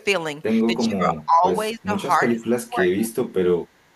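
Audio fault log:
0.00–0.05 s, echo leak: A faint, delayed ghost of the speech, about 30 dB below the main voice, trails the original by about 267 ms. It is heard only as a brief scrap at the very start. This is likely an echo canceller on a loudspeaker-side endpoint that let part of its microphone pickup slip through and sent it back down the line, so the talker hears their own earlier sound returning at that fixed lag.
0.77–1.44 s, 1.74–1.92 s, 2.19–3.15 s, speech suppressed in double talk: In each of these stretches the voice sinks and thins in pieces, dropping by roughly 15 dB in the first two spans and roughly 20 dB in the third. The dips cover a few hundred milliseconds in the first span, a short burst in the second and most of the third. The likely cause is an echo canceller facing simultaneous talk from both ends that could not tell its own talker from loudspeaker echo and attenuated everything.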